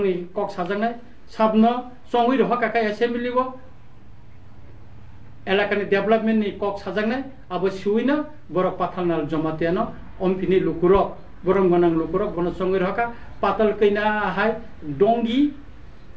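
At 10.95 to 11.01 s comes a phantom power thump: a supply switched on or off steps through the input's coupling capacitors, giving a deep electrical thump that dies within 12 ms, unlike an acoustic bump.

From 11.14 to 12.39 s there are scattered short gaps. Lost or late packets were patched by continuing the last sound, leaving around seven brief ticks and smears, each only about 10 ms, rather than one dropout. The call path, which passes nothing above 8 kHz in a way that fits G.722, carries them.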